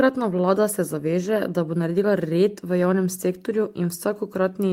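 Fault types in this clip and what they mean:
No technical faults can be heard anywhere in the speech recording, and the signal stays steady and intact throughout.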